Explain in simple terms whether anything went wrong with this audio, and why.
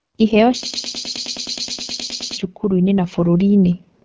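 Several things went wrong. The whole clip went through the AMR wideband (HD Voice) codec at one of its lowest settings. This phone codec squeezes speech hard. Here it makes the speech sound rough and raspy throughout, and the damage is easy to hear.

From 0.63 to 2.37 s there is a broken-record loop. A tiny piece of sound, about a tenth of a second long, plays again and again with no gap. It sounds like a stuck stutter. The likely cause is a stalled player or stream that kept resending its last fragment. Whatever should have played during those seconds is gone.

From 2.6 to 3.89 s there is automatic gain rising. The call's volume control decided the sound was too quiet and slowly turned it up. The voice and the background swell louder together over that stretch. The lowest bass is trimmed by the call's normal microphone filter, which is expected.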